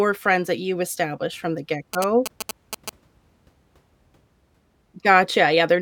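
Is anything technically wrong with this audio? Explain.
Yes. GSM signalling bursts run from 1.94 to 2.90 s, right after "you established from the". A nearby 2G phone's radio bursts get rectified in the audio circuit, producing a galloping dit-dit-dit of short 217 Hz buzzes only slightly quieter than the speech.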